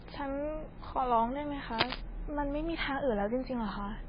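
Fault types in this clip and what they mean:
MP3 compression: Throughout, the speech has nothing above 5 kHz and a watery, swirling texture. This is likely heavy MP3 coding, consistent with a very low bitrate near 16 kbps, where the encoder drops the treble and switches weak frequency lines on and off between frames.
cable scratch noise: From 1.73 to 1.97 s, a dense, uneven burst of scratching noise, roughly as loud as the speech, sits over the sound. It is likely a worn cable or connector shifting, making its contact resistance jump rapidly.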